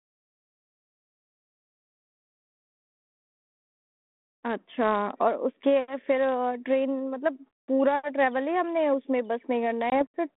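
Right near the end, at 9.9 s, there's packet loss on an ADPCM call: about one packet, 20 ms, drops to a hard-edged silent gap. The decoder's predictor and step size lose track of the sender's, so the speech comes back slightly distorted with a bit of grit, settling by about 10.03 s. The G.726 line at 32 kbit/s, band-limited to 200 Hz to 3.6 kHz, carries only light codec roughness around it.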